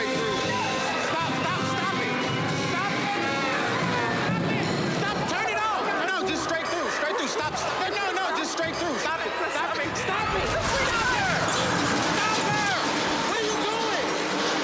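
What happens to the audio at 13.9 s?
Nothing goes wrong at 13.9 s; the audio plays through that moment intact, with no dropout, click or other fault.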